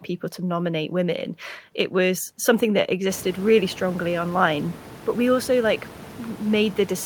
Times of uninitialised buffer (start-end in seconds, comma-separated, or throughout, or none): none